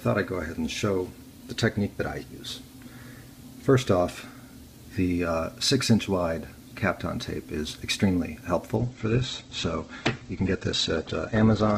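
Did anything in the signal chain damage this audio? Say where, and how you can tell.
Yes: an adaptive stream at a lower bitrate, a network-driven codec switch, from 8.76 s to the end. Quality drops abruptly with no gap, and nothing survives above 8.3 kHz, which fits a fall to roughly 12 kbit/s Opus. On a spectrogram the upper band cuts off sharply there, while the waveform continues unbroken.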